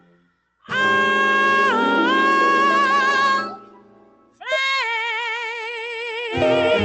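A noise suppressor built for speech was left running on material it wasn't designed for, so it treats sustained tones and decaying tails as noise. Throughout the clip the level pumps and thins as its gain swings by roughly 20 dB, with attacks passing while held sound sinks.

The sound is cut by the noise suppressor from 0.0 to 0.69 s and again from 3.5 to 4.46 s. Here it pulls the audio down by as much as about 19 dB, so steady or fading sound drops away and its decay ends abruptly.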